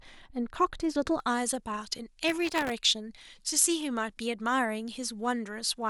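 Speech that turns thin, bright and hissy from 1.2 s to the end, with treble about 11 dB above 1 kHz at 10 kHz. This is pre-emphasis left on: the boost, consistent with a J.17 curve, never got its matching cut. From 2.28 to 2.72 s a gritty crackle tears across the sound. This is processor overload crackle, where dozens of very short buffers in a row miss their deadlines and replay stale audio with hard edges.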